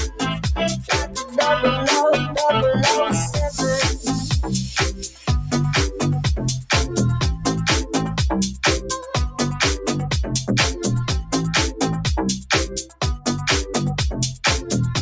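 Across the whole clip a noise suppressor meant for speech stays active on this non-speech audio, mistaking sustained tones and ambience for noise. Level swings by roughly 5 dB, giving a pumping, thinning quality; a waveform shows a breathing envelope, and a spectrogram shows held partials fading while onsets stay bright.

Sound is cut by the noise suppressor at 1.06–1.35 s, 4.94–5.28 s and 12.68–13.01 s, each dip lasting about 0.3 s and deepening over time: about 8, 12 and 14 dB. Sustained material sinks audibly, and the waveform narrows sharply in each span while the spectrogram shows a darker vertical band, capped throughout at 8 kHz by the call's microphone processing.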